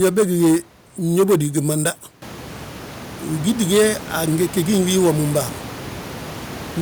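Nothing here points to a technical fault, just some background noise in the room that picks up by about 16 dB around two seconds in and still sits about 17 dB below the speech.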